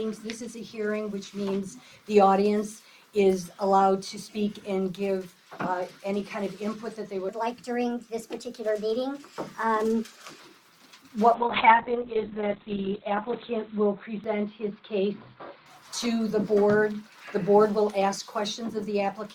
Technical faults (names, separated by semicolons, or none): section at the wrong speed; call bitrate drop